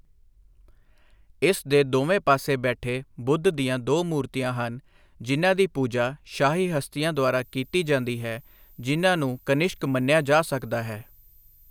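A speech clip with a switching supply whistle from 7.15 s to the end. A thin, high tone appears there. Its pitch wanders between 13.6 and 13.8 kHz. It sits roughly 35 dB below the speech, so it is faint. A switching power supply is the cause. It has dropped into an audible burst mode, or is beating against another supply. Its pitch shifts as the load on it changes.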